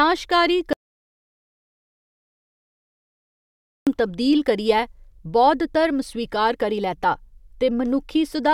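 A speech clip with an audio dropout to silence from 0.73 to 3.87 s, about 3.1 s of dead silence, likely a lost input, before "तब्दील करियै बौद्ध" resumes.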